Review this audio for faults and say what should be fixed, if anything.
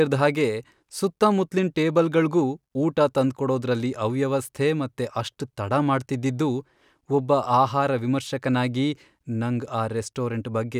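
No faults were found, so nothing needs fixing.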